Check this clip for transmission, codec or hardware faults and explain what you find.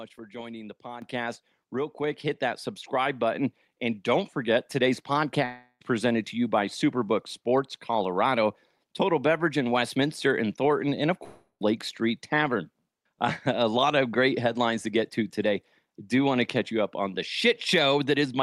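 The clip contains one level fault and two gaps in the audio.

At 1.02 s, just after "for joining the", the microphone volume steps up by about 9 dB. Speech and background noise jump together at once, which is typical of call software raising the device's input gain in one step.

From 5.45 to 5.82 s, after "forget today's", and from 11.24 to 11.62 s, after "and of", the sound freezes into a fading buzz or hiss before a short silence. About 0.36 and 0.37 s of audio are lost, which points to a likely long network dropout that the receiver concealed. The first gap resumes at "presented to you by".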